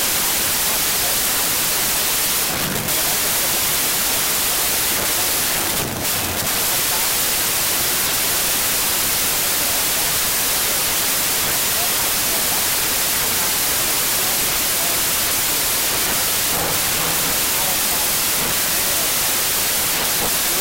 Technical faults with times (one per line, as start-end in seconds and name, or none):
0.00-20.60 wrong sample width